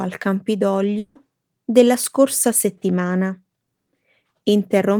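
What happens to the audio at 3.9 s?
At 3.86 to 3.88 s there is a short concealed packet loss: about 10 ms of the speech never reached the decoder in time, and the receiver covered that gap by extending the preceding sound for 10 ms, carrying on its pitch if voiced or as shaped noise if not, before fading back into the real signal. The result is a very brief smear or wobble, and a quick consonant there may drop out.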